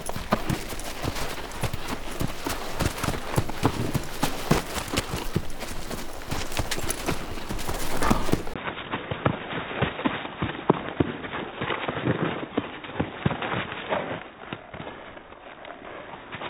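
A recording of everyday sounds that turns dull and boxy from 8.54 s to the end, after a 20 ms silence at the change. From there nothing is heard above 3.8 kHz, the level falls by about 5 dB, and a new faint background noise appears, roughly 40 dB under the sound. This is most likely an input switched to a poorer device. A simple low-pass filter or codec bandwidth drop would not also bring a different noise floor, level and tone.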